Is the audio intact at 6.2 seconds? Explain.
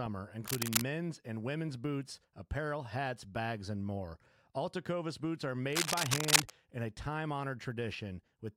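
No. A worn cable or connector is likely being disturbed, producing cable scratch noise from 5.73 to 6.51 s, after "boots are" and before "in a time": dense scratchy rustling about 5 dB louder than the speech.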